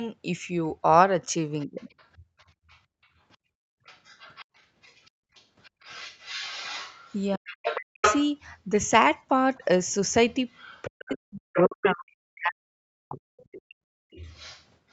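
From 1.6 s to 11.9 s a second voice runs under the speech, roughly 15 dB below it. This is the other side's voice leaking through: the far end was likely playing on a loudspeaker, and the echo canceller left part of it in the microphone signal.

Between 1.66 and 1.8 s the main speech dips briefly by around 20 dB. This is speech suppressed in double talk, with both sides talking at once.

From 2.24 to 2.7 s the room sound drops out for a moment, by about 26 dB, and then comes back. This is background gated by the echo canceller, which clamped the microphone hard while the loudspeaker played.

The double-talk suppression returns more heavily from 7.36 to 8.03 s, pulling the speech down by up to about 40 dB. It comes back again from 9.58 to 13.41 s, where the speech is pulled down by up to about 40 dB, totalling around two seconds. In each case the canceller likely could not separate its own talker from the echo and turned both down.

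From 13.54 s to the end the leaking voice returns, fainter, at around 25 dB below the speech. Within that stretch, from 13.79 to 13.99 s, the background is gated again by about 39 dB.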